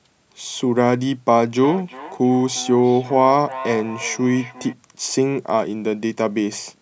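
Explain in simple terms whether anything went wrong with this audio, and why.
From about 1.6 to 4.8 seconds there is a feedback echo between two devices. Two devices in the same room were on the call. One played the other's sound aloud, and that microphone caught it again. The speech comes back a little under half a second later, thinner and ringing.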